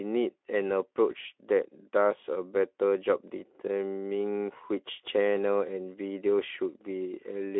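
Nothing's gone wrong anywhere in this speech clip; it simply comes across a Speex link at 15 kbps, with the narrow 300 to 3500 Hz phone-style band you'd expect from that kind of line.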